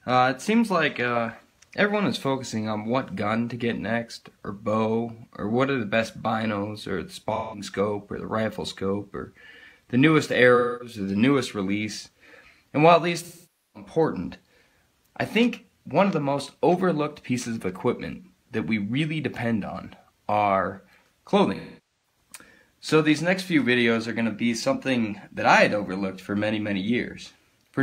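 Around 7.35 to 7.63 s there's a short smeared, phasey patch, and that's AAC frame loss with concealment. The decoder lost about 170 ms of frames and covered the gap by reusing the last good spectrum. It happens again at 10.55 to 10.95 s (256 ms). At 13.23 to 13.90 s the 512 ms gap lasts long enough for the fill to fade toward silence and back. From 21.55 to 22.16 s the losses come scattered, with the longest stretch around a third of a second.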